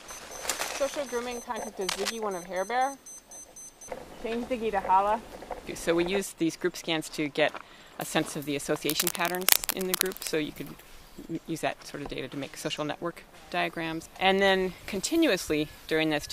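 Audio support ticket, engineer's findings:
Likely a worn cable, connector or control carrying DC, with contact resistance jumping as it was moved. Result: cable scratch noise, dense uneven scratching bursts at roughly the signal's own level, 1.88 to 2.11 s (about 0.23 s) and 8.86 to 10.36 s (about 1.5 s).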